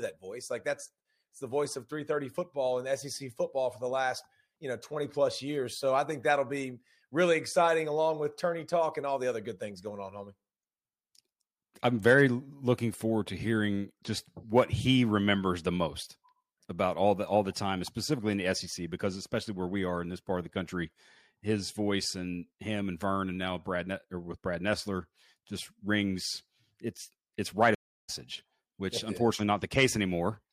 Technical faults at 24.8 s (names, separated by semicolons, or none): none